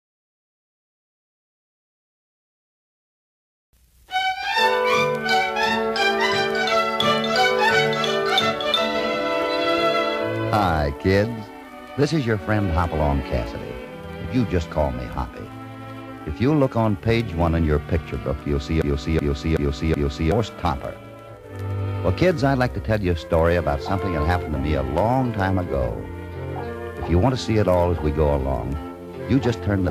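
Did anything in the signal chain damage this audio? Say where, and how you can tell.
Yes: a broken-record loop runs from 18.82 to 20.32 s, where one 375 ms fragment plays four times back to back, identical on each pass. The player or stream likely stalled and kept resending its last held piece, so the audio due there never arrives.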